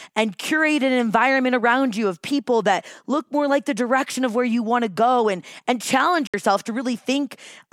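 At 6.27 s, just after "go and and challenge", the speech cuts to silence for about 64 ms and returns at 6.34 s, picking up further along as though it had kept playing through the gap. This is a Bluetooth dropout: the hole is most likely a few wireless audio packets arriving too late at the headphones and being discarded, so nothing was output until valid data resumed.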